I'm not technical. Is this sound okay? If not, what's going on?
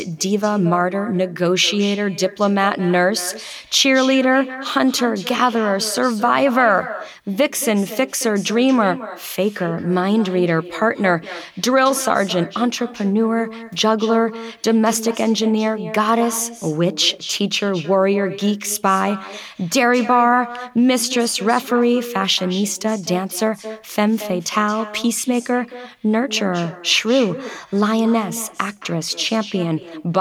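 No. Throughout the speech there is an echo with no canceller. At the far end, the call is playing through a loudspeaker, that speaker's microphone picks it back up, and nothing strips it out before it returns. Each phrase is therefore followed, roughly a fifth of a second later, by a noticeably quieter copy that sounds thinner. It persists for the entire recording.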